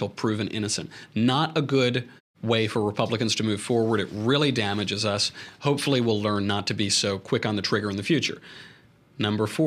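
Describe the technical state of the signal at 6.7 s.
At 6.7 s the signal is intact, with no fault to be heard at that moment.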